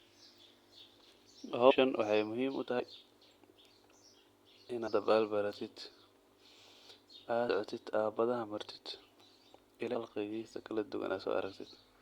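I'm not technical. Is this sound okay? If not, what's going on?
No. The recording has compressed frames skipped, at 1.69 s (just before "waxay muxiim"), at 2.79 s (right after "waxay muxiim"), from 4.86 to 4.88 s, at 7.48 s, and from 9.93 to 9.95 s. Each time, a few small chunks of the recording went missing or were rejected as damaged, so the speech jumps ahead. The jump is as short as a twentieth of a second and as long as about a fifth of a second near 9.9 s.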